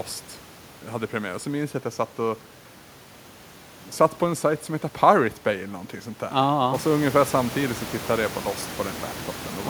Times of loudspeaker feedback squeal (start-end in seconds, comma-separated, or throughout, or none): none